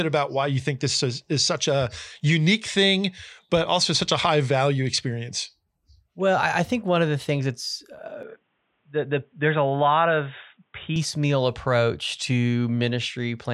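Input switched to a poorer device, 8.23 to 10.96 s, after "the things that's uh": likely a narrower-band microphone, nothing above 3.8 kHz, sounding dull.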